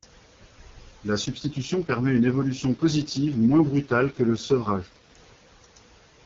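A speech recording carried over an AMR wideband (HD Voice) link suffers an AMR rate drop from 1.25 s to 5.16 s. The network pushed the codec down to a low mode to spend more bits on error protection, and the sound fits a fall from the 23.85 kbit/s mode to the 6.6 kbit/s mode. Across that span the speech turns rough, raspy and synthetic, with no gap and no loss of bandwidth, before clearing again once the higher rate returns.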